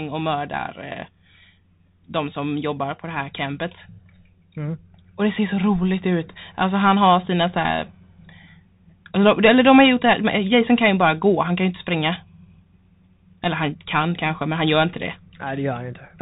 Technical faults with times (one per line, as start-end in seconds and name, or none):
0.00-16.22 Bluetooth CVSD headset codec